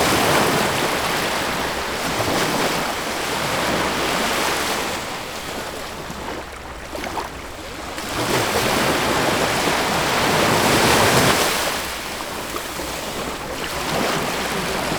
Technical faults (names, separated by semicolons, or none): clock drift buffer slips